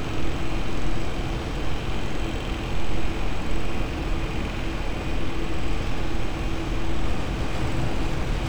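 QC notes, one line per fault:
Throughout: crude rate conversion. Samples are dropped or repeated without filtering, which fits a 48 kHz to 44.1 kHz conversion, leaving an inharmonic gritty fizz roughly 35 dB below the sound. Unlike steady hiss, it rises and falls with loud, bright passages.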